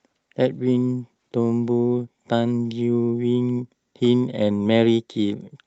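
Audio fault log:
throughout, clock drift between sender and receiver: the sending device's clock runs around 4 percent fast, so the jitter buffer keeps overfilling and the receiver must discard audio to keep up. The speech carries recurring small timing hiccups at uneven intervals rather than a smooth flow.
0.03–5.63 s, repeated timing corrections: to drain the surplus, the receiver keeps cutting short pieces out, all in the same direction, netting a pace of about 104 percent. The cuts are irregularly spaced and small, heard if at all as a slightly unsteady speech tempo through the Opus call path's band-limited sound, which tops out around 8 kHz.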